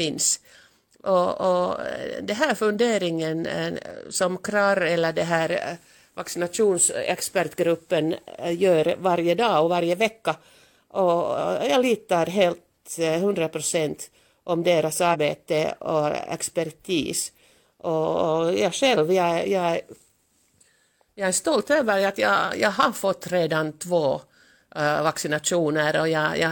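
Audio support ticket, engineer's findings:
Speech track, damaged data in a compressed stream at 15.10–15.16 s, right after "eh procent om deras". Symptom: roughly 60 ms glitch in the speech. Probable component: the decoder hitting corrupt bytes, losing frame sync and resyncing at the next header. Spectrogram: short broadband smear or bright vertical streak breaking the speech harmonics. Waveform: abrupt discontinuity, a short segment unlike the surrounding envelope, and no fade at either edge.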